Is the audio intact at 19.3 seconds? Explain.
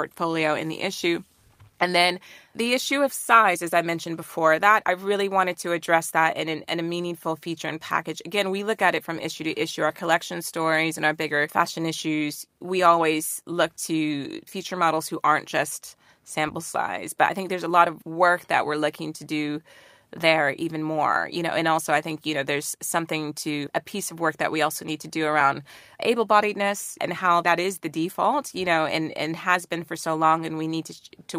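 Yes, at 19.3 seconds the speech runs on intact, with no dropout, click, distortion or other fault to be heard at that moment.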